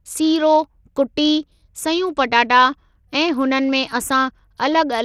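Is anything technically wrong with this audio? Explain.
Yes. Throughout the speech, the treble thins out and flickers while a gritty grain and aliasing ride on the sound, most likely from Bluetooth SBC compression at a small bit pool. Its simple sub-band allocation starves the upper bands and coarsely quantises the rest, which fits a bitrate around 80 kbps.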